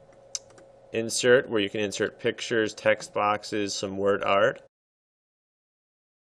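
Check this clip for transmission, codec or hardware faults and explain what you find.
No transmission, codec or hardware faults are audible; the signal runs without dropouts, distortion or glitches, and the level tapers off in a smooth, deliberate fade-out from around 4.5 s that is complete by 4.68 s, with no step or click.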